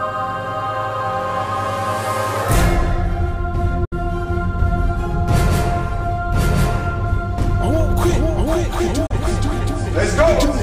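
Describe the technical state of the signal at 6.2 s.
At 6.2 s the signal is intact, with no technical fault present at that moment.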